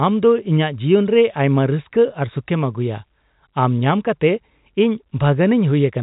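There are no technical faults to describe in this speech clip, which carries the narrow band of G.711 telephone coding.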